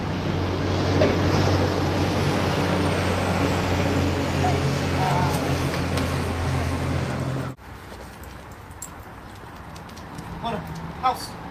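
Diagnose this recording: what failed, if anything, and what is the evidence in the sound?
Nothing in the signal chain has failed: the audio is continuous and stable, with no dropouts, discontinuities, level jumps or added noise anywhere in the recording.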